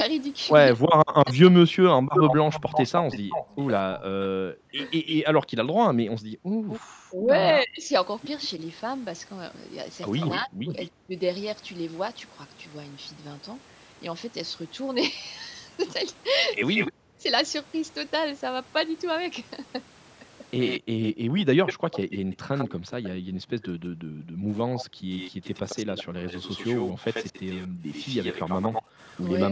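From 0.74 to 11.19 s, the echo canceller likely struggled with double talk. It could not separate the near talker from the loudspeaker echo, so it pulled both down. The speech therefore dips in pieces, roughly 2 seconds in total and by as much as 40 dB at the deepest. Over nearly the same span, 1.25 to 10.87 s, there is an echo leak. The canceller likely left some of the loudspeaker signal in the microphone feed, and it comes back about 225 ms late, only a few dB below the direct speech, so a trailing copy of the loudspeaker voice is heard. Between 5.31 and 6.69 s the background is gated by the echo canceller. While the loudspeaker played, it clamped the microphone by about 40 dB, and the room sound drops out for about a second and a half before returning. At 16.71 to 16.92 s another brief echo leak appears, likely from the same canceller, delayed about 189 ms. It is followed right away by double-talk suppression from 16.92 to 17.25 s, likely when both sides overlapped, which knocks the speech down sharply for about 0.3 s. 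From 20.61 to 29.44 s the echo leaks again, probably through the same path, now about 94 ms behind and roughly 10 dB down. At 20.79 to 20.89 s a short double-talk dip, likely caused by overlap again, cuts the speech for about 0.1 s. From 21.17 to 28.99 s the canceller's gating returns, pulling the background down by about 40 dB in stretches that add up to roughly 3 seconds. The room tone comes and goes in step with the loudspeaker. Throughout, the call microphone processing limits the audio to nothing above 8 kHz.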